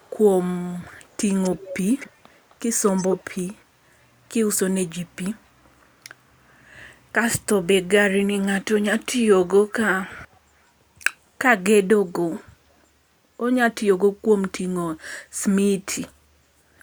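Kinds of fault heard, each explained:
Echo leak: a delayed copy of the speech trails it by about 260 to 280 ms, ranging from barely audible to fairly prominent near 2.9 s, in bursts between 0 and 3.2 s and near 10.1 s; likely residual loudspeaker pickup an echo canceller failed to remove.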